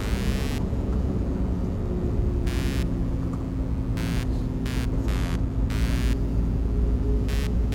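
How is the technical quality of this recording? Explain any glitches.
The recording has one fault, present from start to finish: computer activity noise. Running under the everyday sounds is a buzzy, chirping scratch pulsing around 100 times a second, roughly 20 dB below the wanted sound. Changing processor, graphics or mouse load drags on the ground the audio circuit shares with the computer, so the interference rises and falls with the machine's work. Unlike steady mains hum, it flickers and shifts independently of anything happening in the recorded sound.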